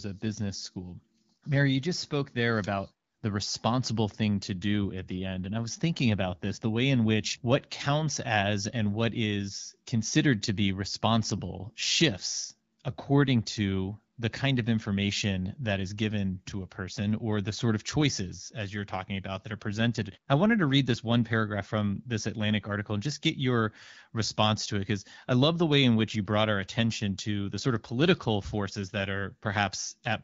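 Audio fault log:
No faults are heard in this speech clip. The AMR wideband (HD Voice) codec path is audible only as light coding with the band reaching to about 7 kHz, which fits a rate of around 12.65 kbit/s.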